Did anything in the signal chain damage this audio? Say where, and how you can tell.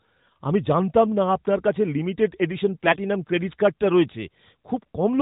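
Yes. AMR bit errors on the network link, 2.84 to 2.97 s: hoarse, gargly distortion that keeps roughly its pitch and level, unlike lost packets, which would leave gaps or smeared concealment.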